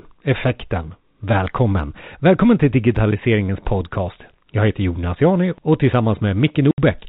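Speech heard over a narrowband telephone path, with nothing above 4 kHz as G.711 coding gives, breaks off once near the end: from 6.71 to 6.78 s there is a 70 ms hole of dead silence with abrupt edges. That is packet loss filled with silence, and the length fits seven 10 ms packets going missing together. Concealment would bridge such a gap with repeated or faded sound. Here the receiver inserts silence, so the cut is hard-edged.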